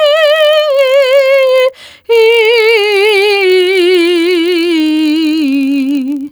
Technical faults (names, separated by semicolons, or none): gain pumping; block size mismatch (padded)